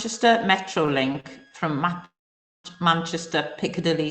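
A speech clip with a steady high whistle throughout, sitting between 1.65 and 1.67 kHz, roughly 30 dB below the speech. This is switching supply whistle, from a power supply running in audible burst mode. Between 0.85 and 1.54 s the speech stutters with five short stalls, the longest 38 ms. These are repeated stalls: packets arrived late, so the receiver stretched the last sound until audio resumed. From 2.05 to 2.67 s the sound halts, briefly holds, then falls silent for about half a second before continuing where it stopped. This is a call audio freeze, likely caused by packets held up in transit so the jitter buffer ran empty. The call path itself limits the audio to about 8 kHz.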